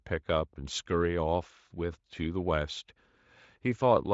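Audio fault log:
No faults heard.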